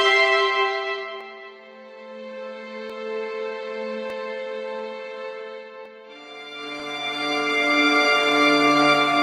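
Dropped samples at 1.21, 2.90, 4.10, 5.86 and 6.80 s: each is a single sharp click, showing as a thin vertical line through the spectrum. The likely cause is a tiny stretch of the stream, well under a millisecond, going missing, so the waveform leaps straight from one value to a later one. The gap is too brief to remove any audible sound, but the sudden jump is heard as a tick.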